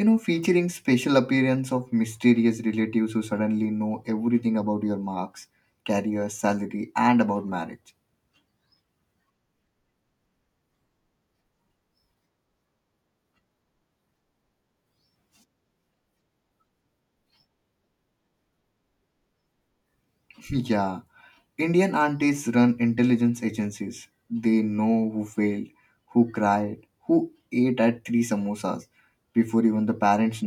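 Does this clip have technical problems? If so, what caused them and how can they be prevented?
No, the speech holds steady throughout with no audible technical faults, so there is nothing to trace or prevent.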